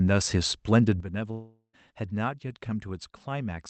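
At 1.00 s the speech and its background noise drop together by about 11 dB in a single step and stay at that lower level to the end, likely a sudden gain jump where a new digital gain was applied without any ramp.

From 1.31 s to 1.75 s the speech turns into a fading buzz, then about 0.1 s of near-silence, and resumes with roughly 0.42 s missing. This was likely a long network dropout, with the receiver stretching the last received sound to cover the gap.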